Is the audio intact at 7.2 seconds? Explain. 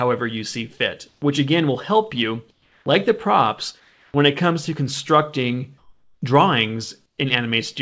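No. Comfort noise in place of the background runs from 7.06 to 7.18 s. For 120 ms the real background gives way to a steady, featureless hiss about 6 dB quieter, likely because the sender paused transmission and the receiver filled the gap with synthetic noise.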